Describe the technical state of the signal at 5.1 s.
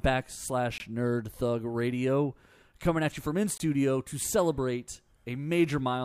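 At 5.1 s the signal is intact, with no audible fault of any kind at that point in the speech.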